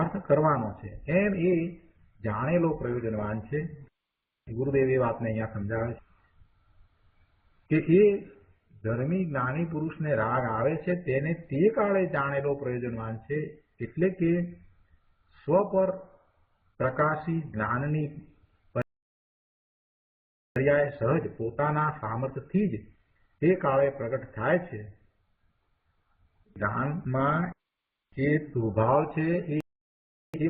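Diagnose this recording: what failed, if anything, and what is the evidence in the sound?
The sound cuts to silence mid-flow from 18.82 to 20.56 s (about 1.74 s) and again from 29.61 to 30.34 s (about 0.73 s). This is a playback stall, likely from the player's buffer running dry or its output thread being blocked.

After each gap the audio comes back hurried at normal pitch: 1.15 times speed from 20.56 to 23.56 s, and 2 times speed from 30.34 s to the end. This is time-compressed catch-up, where the player cuts and cross-fades small slices to drain its backlog.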